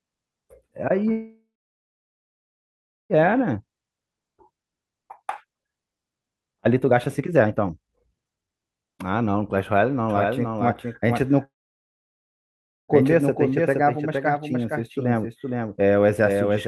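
At 1.11 s the speech halts and does not resume until 3.13 s. This is a call audio freeze. Packets were likely held up in transit, so the jitter buffer ran dry. The receiver stretches the last sound into a brief fading buzz, then goes silent for about 1.65 s. On a waveform this shows as a short decaying tail followed by a flat line. When the speech returns it carries on from where it stopped, so nothing is lost but everything after it arrives about 2 s late.

From 3.23 s to 9.79 s a jitter buffer speed-up follows. The receiver works off the backlog by cutting many tiny pitch-period slices, trimming roughly 2 s in total. The speech runs at 130% speed with its pitch unchanged and sounds noticeably hurried. On a spectrogram the harmonic bands stay at the same height while syllables and pauses are compressed in time.

At 10.10 s a doubled audio track starts abruptly and lasts to the end of the clip. 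A full-band copy trails roughly half a second behind at about 5 dB quieter, likely from a second, slower capture path. It has no reverberant decay, so the spectrogram shows every syllable repeated as a fainter, time-shifted twin.

Between 11.45 s and 12.91 s a second call audio freeze repeats the first pattern. A brief fill gives way to about 1.39 s of flat silence, and the speech then resumes intact, roughly 1.44 s late.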